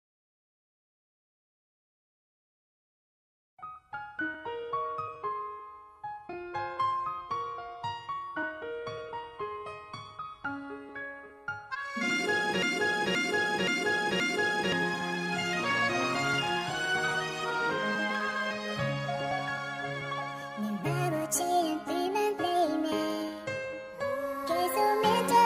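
A stalled player, encoder or stream likely kept resending its last fragment, producing a broken-record loop from 12.62 to 14.72 s: a 0.52 s piece of sound repeats exactly four times back to back, and whatever should have played in those two seconds is lost.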